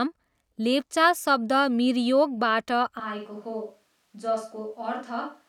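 At 3.00 s, just after "लेप्चा शब्द मिरयोकबाट", the speech abruptly turns roomy and hollow, thins in the bass and falls about 5 dB, with room noise near 35 dB below it, to the end. This is likely a switch to a distant microphone.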